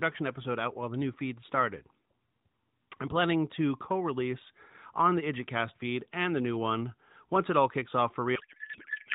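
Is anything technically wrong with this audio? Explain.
Yes. There is a codec payload misread from 8.36 s to the end at 9.14 s, right after "it all kicks off". The decoder takes AMR frames packed one way and reads them as if packed another, likely octet-aligned data read as bandwidth-efficient. The fields land in the wrong places. Speech turns into garbled noise and warble that barely tracks it. The narrowband mobile codec before this sounds lightly coloured, consistent with AMR-NB at 12.2 kbps.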